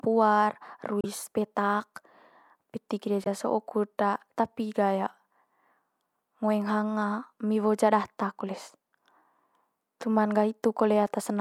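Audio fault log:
1.01 to 1.05 s: damaged data in a compressed stream. A 40 ms glitch cuts into the speech where corrupted bytes make the decoder misread its frames and lose sync.
3.24 to 3.27 s: damaged data in a compressed stream. A 32 ms glitch, just before "so'o kut", as the decoder hunts for the next valid frame header.
11.07 s: damaged data in a compressed stream. A brief blip from one more damaged spot in the compressed data.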